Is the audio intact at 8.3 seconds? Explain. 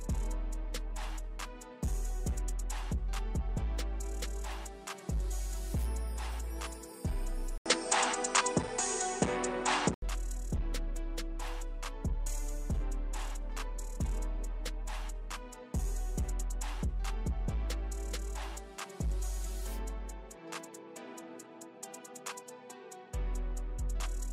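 No. From 7.58 to 10.02 s the sound turns duller, with nothing above 9.3 kHz and a new noise floor about 40 dB below the signal, likely from the input switching to a poorer device. On a spectrogram the top band cuts off flat, and the waveform shows an 80 ms gap and a level step of around 5 dB.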